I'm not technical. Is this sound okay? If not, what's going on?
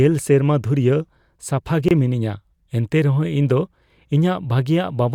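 No. At 1.88 to 1.91 s, between "ᱥᱮᱨᱢᱟ ᱫᱷᱩᱨᱭᱟᱹ ᱥᱟᱯᱷᱟ" and "ᱜᱮ ᱢᱤᱱᱟᱹᱧᱟ ᱮᱱᱛᱮ ᱨᱮᱦᱚᱸ", there's a gap at a join of encoded pieces. Two separately saved chunks were stuck together, leaving a 24 ms dropout before the speech picks up again.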